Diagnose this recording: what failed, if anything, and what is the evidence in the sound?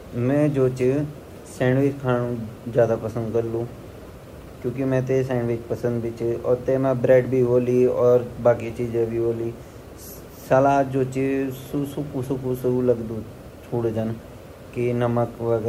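Nothing stood out on listening to the recording that would point to a failure at any stage.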